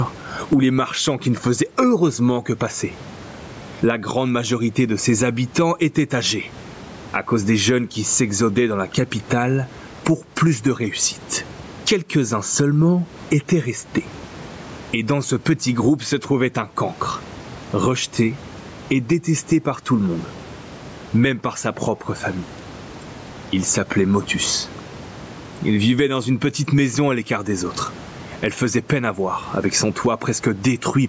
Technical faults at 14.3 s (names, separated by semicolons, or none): gain pumping